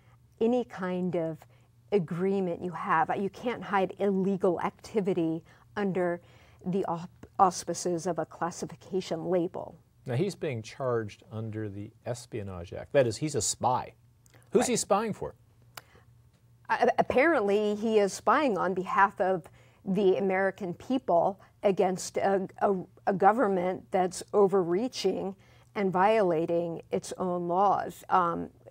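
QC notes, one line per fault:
24.72 s, dropped samples: a single sharp click appears as a thin vertical line across the spectrum. It is most likely caused by a couple of samples missing from the stream, so the waveform jumps straight from one value to a later one. The gap is a tiny fraction of a millisecond, far too brief to take any sound away. Unlike a dropout, there is no audible hole or silence. Unlike a pop, there is no low-frequency thump, only an instant discontinuity.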